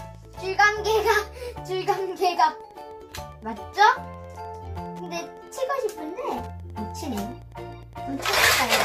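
From start to finish there is Wi-Fi interference. A nearby Wi-Fi radio's beacon, sent every 102.4 ms, is picked up and rectified by the audio circuit. It sounds like a steady ticking, about ten times a second, sitting roughly 35 dB below the sound.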